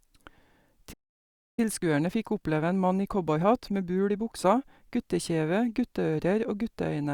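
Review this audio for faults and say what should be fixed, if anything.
Playback stall, 0.93 to 1.60 s: the speech cuts to silence for about 650 ms in mid-flow, then resumes where it broke off. The likely cause is the player starving for data or its output thread being blocked, leaving nothing to send to the device.

Time-compressed catch-up, 1.60 to 4.60 s: immediately after the gap, the speech runs about 1.1 times fast at unchanged pitch. The player is trimming its backlog by removing short slices and cross-fading the joins.

To prevent both, give the player a deeper buffer and keep its audio thread free of blocking work, so it never runs dry and has no backlog to compress.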